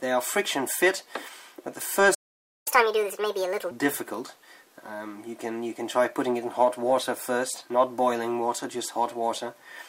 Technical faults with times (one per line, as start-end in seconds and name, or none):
2.14-2.68 playback stall
2.68-3.71 catch-up at higher speed